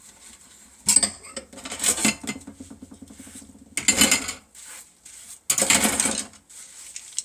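No technical faults can be heard anywhere in this recording of sounds. Nothing in the audio calls for comment at any point.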